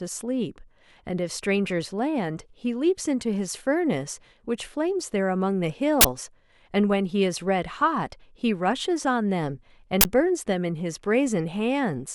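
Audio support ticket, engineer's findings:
Uninitialised buffer: 40 ms output block played out before audio was written into it, so stale memory went to the DAC as samples. Heard as short, loud bursts of digital noise at 6.01–6.05 s and 10.01–10.05 s.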